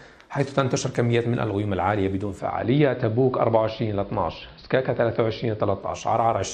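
From 2.14 s, digital radio blending to analogue fades over 0.45 s to AM; spectrogram narrows to a band-limited top with faint hiss until 6.19 s.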